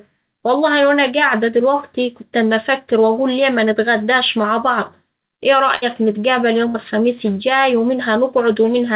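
At 4.42 s, between "أفكر وأقول ليه منتغداش" and "بعض إيه", a short concealed packet loss occurs. About 20 ms of audio arrived too late for the decoder. The receiver extended the preceding sound for roughly 15 ms and then blended back, which leaves a brief smear in the narrowband speech. Nothing above 4 kHz comes through, which fits a G.711 mu-law call path.

Two bursts of packet loss follow: the first at 5.76 to 5.84 s, after "بعض إيه", and the second at 6.68 to 6.76 s, before "الخميس الجاي". Each time, several consecutive packets went missing. The receiver synthesized about 63 ms of continuation that fades away, heard as a held buzz or dying hiss, and then resumes with about 60 ms of the original speech gone.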